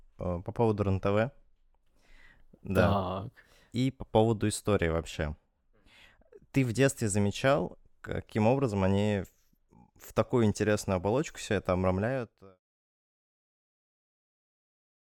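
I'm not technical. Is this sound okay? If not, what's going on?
Yes, nothing in this speech recording stood out as a problem on listening, and the gentle fade-out from about 12 s to 12.6 s is simply the usual smooth way of ending a recording.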